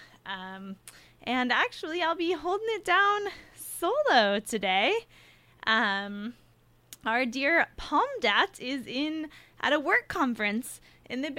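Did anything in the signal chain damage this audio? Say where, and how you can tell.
No, nothing in the signal chain audibly damaged this audio. I can't trace any audible problem to the wiring, converter, buffering, processing, network, storage or playback stage.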